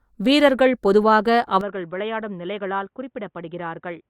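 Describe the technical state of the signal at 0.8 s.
At 0.8 s the speech signal is intact, with no dropout, clipping, distortion or other fault audible at that moment.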